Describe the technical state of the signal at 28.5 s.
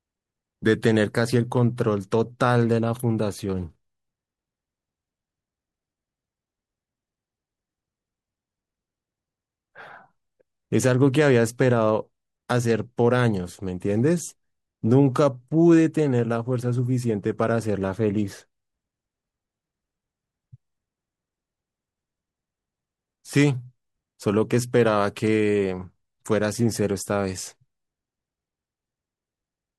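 At 28.5 s the speech signal is intact, with no audible fault at that moment.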